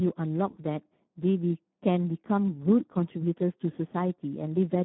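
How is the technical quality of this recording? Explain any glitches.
The quality is poor: the speech has heavy Speex codec damage throughout. Starved CELP coding, which fits a low bitrate around 8 kbps, leaves the voice hoarse, noisy and close to robotic, confined to roughly 150 Hz to 3.5 kHz with nothing above 3.9 kHz. Unlike plain telephone band-limiting, the harshness sits inside the voice itself, not just in missing treble.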